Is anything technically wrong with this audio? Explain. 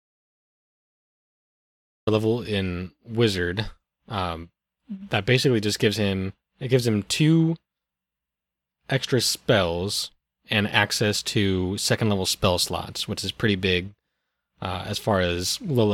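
Yes. From 0.0 to 2.07 s, audio dropout to silence: the speech opens in silence with no room tone, likely from lost input while recording continued, unlike a natural quiet pause.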